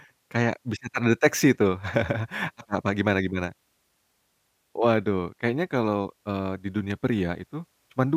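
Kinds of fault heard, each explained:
No technical faults can be heard anywhere in the speech; the signal stays steady and continuous throughout.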